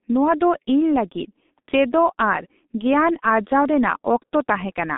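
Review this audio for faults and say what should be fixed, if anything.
G.723.1 codec damage runs throughout the speech. The sound is confined to a telephone band of roughly 200 Hz to 3.7 kHz, with nothing above 3.8 kHz, so it comes across as muffled. The coder rebuilds the voice from a coarse model that refreshes only every 30 ms, which leaves the voice hoarse and smears consonants into one another. The heavy damage points to a very low rate, around 6.3 kbit/s. To prevent it, record or route the speech through a wideband codec at a higher bitrate instead of G.723.1.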